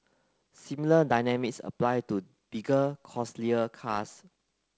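Nothing faulty is audible in this wideband telephone speech.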